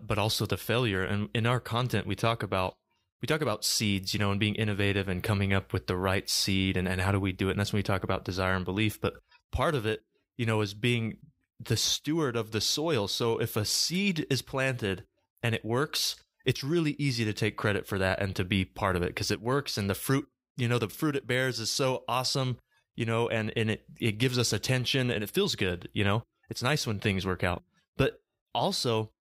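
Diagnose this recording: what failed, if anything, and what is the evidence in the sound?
Listening through the recording, nothing stood out as a failure at any stage of the chain.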